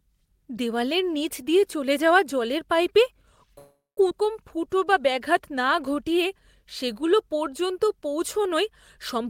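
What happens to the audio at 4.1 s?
At 4.09 s the speech skips ahead: about a third of a second of audio is thrown away, likely by an overflowing jitter buffer, and the two sides are spliced with an 8 ms fill. Unlike a dropout, there's no audible silence, just an abrupt forward jump.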